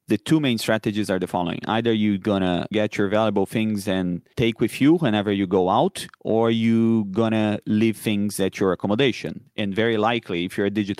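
Speech recording, and nothing is technically wrong with it.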